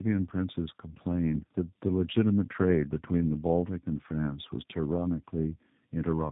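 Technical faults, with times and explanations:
Throughout: tandem speech coding. The speech sounds rough, muffled and warbly, with nothing above 3.8 kHz. That fits two low-rate speech codecs in a row, the second recoding the first's damage.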